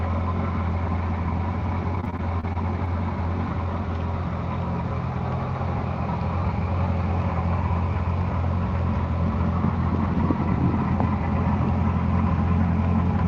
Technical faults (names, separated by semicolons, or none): repeated packet loss (robotic sound)